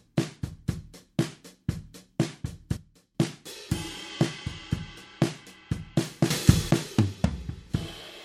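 At 2.77 s the level drops by about 12 dB in one step until 3.15 s, and at 6.30 s it leaps up about 12 dB until 6.71 s. Each sudden gain jump moves sound and noise floor together, likely a gain change applied without a ramp.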